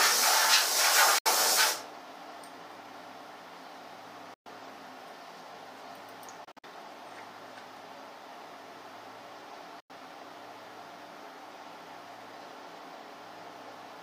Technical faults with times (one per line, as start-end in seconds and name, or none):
1.18-1.26 Bluetooth dropout
4.34-4.46 Bluetooth dropout
6.44-6.64 Bluetooth dropout
9.80-9.90 Bluetooth dropout